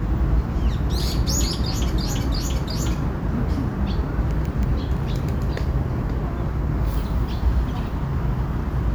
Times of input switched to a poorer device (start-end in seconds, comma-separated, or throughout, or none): none